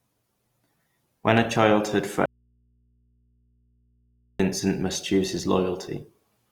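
Throughout, the speech has a grainy, rough, noisy texture with plainly audible codec damage, likely Opus compression in its music mode at a low rate, which fits about 24 kbps. Between 1.38 and 1.48 s, two loud pops sit a few dB above the speech, which carries on underneath, likely a sudden voltage pulse from a plug, switch or static. From 2.26 to 4.40 s, an audio dropout to a faint residue: the speech cuts out abruptly for about 2.14 s, leaving only mains hum some 40 dB down, until it returns at "must choose his". The signal was likely lost while the path after the break stayed live.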